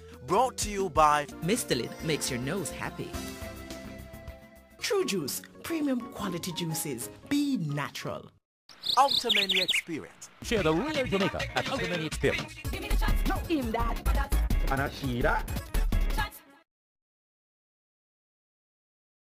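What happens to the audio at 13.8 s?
At 13.8 s the audio sits inside a time-stretched section running from 9.93 s to the end of the clip. The likely cause is software squeezing that stretch to fit a shorter length, cutting out short slices and joining what remains so the pitch holds steady. The result plays about 1.51 times faster from 9.93 s onward: the pace jumps abruptly while the pitch stays put, giving a rushed sound.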